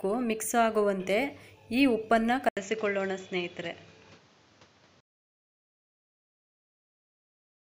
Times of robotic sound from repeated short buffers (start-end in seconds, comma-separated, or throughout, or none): none